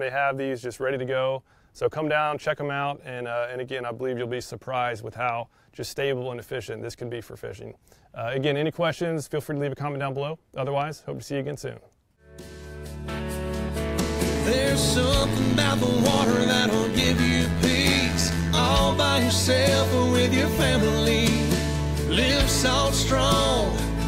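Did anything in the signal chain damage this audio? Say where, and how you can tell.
Yes. From 15.21 to 18.57 s there's overlap-add ripple, which points to a frame-based processing stage, the sort of windowed resynthesis you'd find in call processing. The level pumps up and down by about 11 dB at around 100 Hz, giving a metallic buzz with extra tones around each note. The windows being stitched back together don't overlap in a way that sums to a flat gain, so every frame boundary puts its own bump into the loudness.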